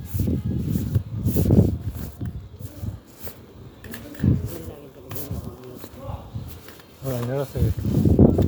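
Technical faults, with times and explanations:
No technical faults are present; the everyday sound arrives with its level and frequency content intact throughout.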